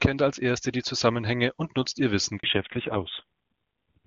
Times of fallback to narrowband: 2.43-4.07

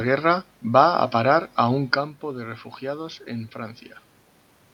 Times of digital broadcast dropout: none

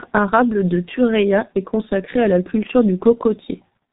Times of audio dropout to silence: none

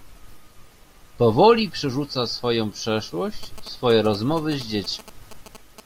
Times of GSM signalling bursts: 3.43-5.80

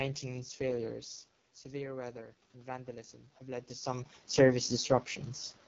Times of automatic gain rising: 1.65-4.99

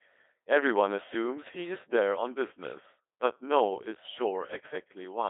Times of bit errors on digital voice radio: none

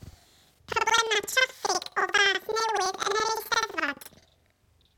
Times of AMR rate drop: none

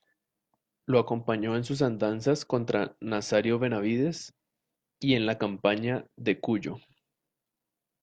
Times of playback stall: none

